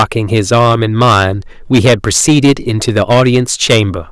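Hard clipping runs through the whole speech clip. The signal is driven about 13 dB past what one stage can pass. Its peaks are sliced flat, around seven percent of the samples. Those flat tops add high harmonics, heard as a harsh fuzz on every loud syllable.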